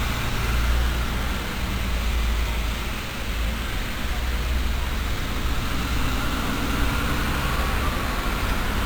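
A bright, metallic fizz rides on top of these sounds for the whole clip, rising and falling with their level, about 23 dB below them, and moving opposite to their pitch. It is imaging from sample-and-hold upsampling: mirrored copies fill roughly 11 kHz to 22 kHz, which points to a 22 kHz source raised to 44.1 kHz by repeating samples without a smoothing filter.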